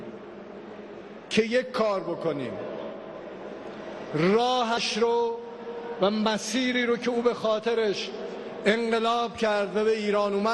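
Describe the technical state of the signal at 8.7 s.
At 8.7 s the sound is dull and muffled, with a gurgling, granular roughness, and this persists across the whole clip rather than just this moment. The likely cause is MP2 compression at a low bitrate, which fits roughly 80 kbps. Layer II divides the spectrum into 32 equal sub-bands; starved of bits, the upper bands drop out or flicker on and off, and the remaining ones are coarsely quantised, producing that plainly audible grit.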